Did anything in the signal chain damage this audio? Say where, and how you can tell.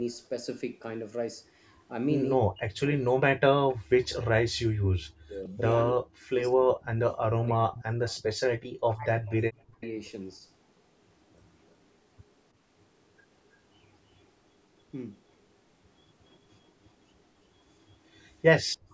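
Yes, in the call processing stage. From 2.43 to 7.81 s, and again from 8.7 to 9.82 s, the speech repeatedly dips by as much as about 40 dB and drops out in pieces, adding up to roughly four seconds and one second of damaged speech. This pattern is most likely speech suppressed in double talk. While the far end was talking, the echo canceller could not tell this talker from its own loudspeaker echo, so it attenuated both.

A faint delayed copy of the speech sits under the signal from 7.13 to 8.24 s, 9.27 to 9.88 s, and 18.89 to 18.93 s. It trails by about 310, 314 and 333 ms, and falls to about 20, 25 and 35 dB below the main speech. This is likely echo leak. A loudspeaker-side canceller left some residue of what its microphone picked up and sent it back. The same call chain's band limit, with nothing above 8 kHz, is normal microphone processing and not a fault.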